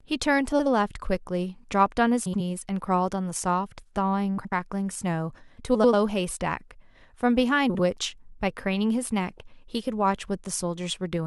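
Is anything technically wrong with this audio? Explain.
Yes. Frames out of order occur at 0.52–0.67, 2.26–2.40, 4.37–4.52, 5.74–5.94 and 7.69–7.80 s. Two adjacent blocks, about 70 ms each (93 ms at 5.74, 46 ms at 7.69), play swapped. Each sounds like a garbled flutter. No time is lost.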